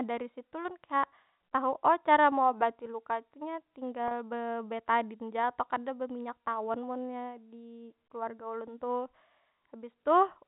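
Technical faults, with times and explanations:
4.08–4.11 s, packet loss with pitch repetition: about 30 ms of audio went missing between "meobati luka tuh nya" and "bebetadin ja atau kada", a gap that fits three lost 10 ms packets. The receiver filled the hole by repeating the last pitch period of the speech and fading it, so the loss is heard as a brief, slightly held buzzy tone rather than silence, with the speech resuming through a short cross-fade. The G.711 telephone coding carrying the call keeps everything below 4 kHz.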